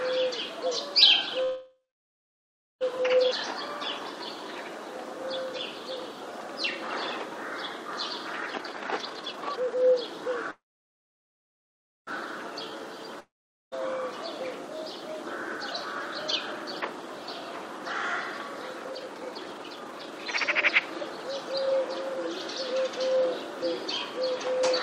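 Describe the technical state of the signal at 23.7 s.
At 23.7 s the audio is intact, with no technical fault present at that moment.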